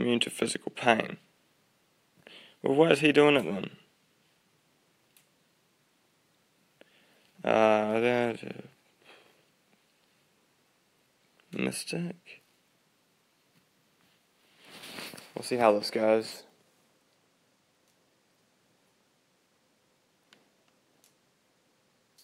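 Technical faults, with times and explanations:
No technical faults can be heard anywhere in the audio.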